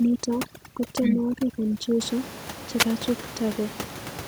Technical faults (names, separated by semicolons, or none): overdone noise removal; wireless microphone noise hit